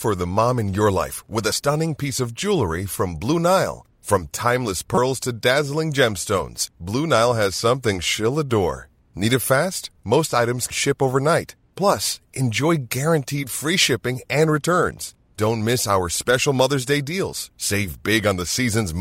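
At 1.52 s and again from 4.94 to 4.98 s, damaged data in a compressed stream makes the decoder misread frames and lose sync. Each is heard as a brief chirp, squawk, click or short hole in the speech.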